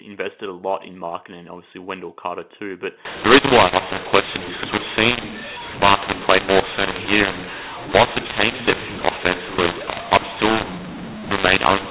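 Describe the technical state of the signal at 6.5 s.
At 6.5 s the speech suffers a mu-law and A-law mix-up, running from 3.05 s to the end. Samples coded with mu-law are read back as A-law. Levels get scrambled, so the speech sounds harsh and distorted, and pauses fill with noise.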